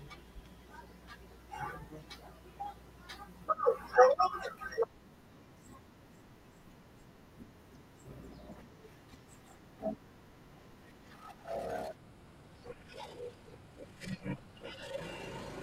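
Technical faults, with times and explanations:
11.96–15.62 s: section at the wrong speed. The speech runs at 0.74 times its pace and sounds deeper by roughly five semitones. It was likely played against the wrong clock.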